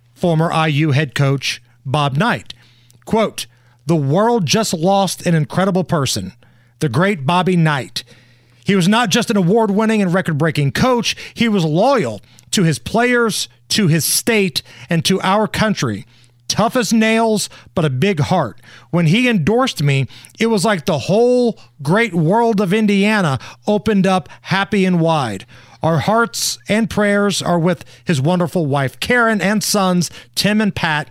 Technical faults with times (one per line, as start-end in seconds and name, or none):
none